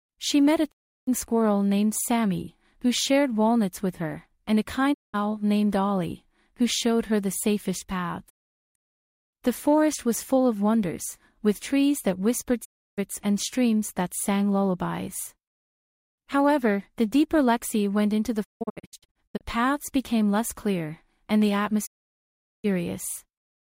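The audio has six digital broadcast dropouts. Each mutes with a fast fade of about 20 ms, at 0.70–1.09, 4.92–5.16, 8.28–8.77, 12.64–13.00, 18.43–19.43 and 21.85–22.66 s. The 18.43 s one breaks into short holes. The receiver lost frames and muted. That material is gone.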